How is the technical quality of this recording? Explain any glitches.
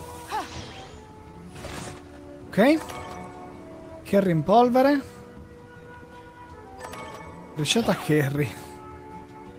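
Timing is the weak point, with small recurring hiccups throughout.

Clock drift between sender and receiver runs the whole clip: the sender's clock is roughly 4% slow, so the receiver's buffer keeps draining.

Repeated timing corrections, from 0.12 to 9.54 s, fill the shortfall by repeating short pieces, adding about 0.4 s and giving an uneven, slightly dragging tempo.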